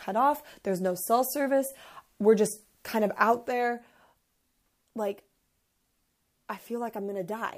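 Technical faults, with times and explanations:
3.48 s to 7.57 s, sudden gain jump: at 3.48 s the speech and the background noise drop together by about 6 dB, with no fade, and stay at that lower level to the end. The cause is likely a digital gain change applied between one sample and the next without a ramp. On the waveform the envelope steps down abruptly to about half its height. On a spectrogram every frequency band darkens at once along a vertical boundary.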